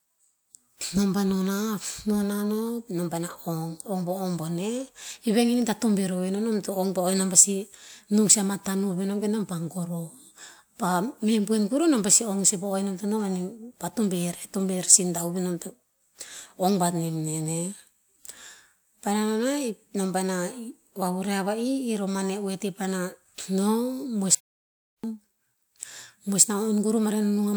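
At 24.35 s the speech cuts out into dead digital silence for about 0.69 s, with no room tone underneath, and picks up again at 25.04 s. That's an audio dropout to silence, likely the input dropping out while the recorder kept writing silence, so whatever was said there is simply gone.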